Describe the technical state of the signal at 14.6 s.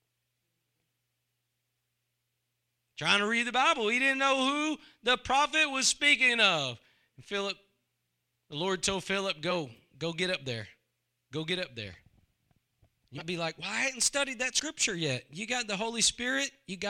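Compressed frames are skipped at 14.58 to 14.64 s, just after "I hadn't studied that". About 50 ms of speech is lost, so the audio jumps ahead.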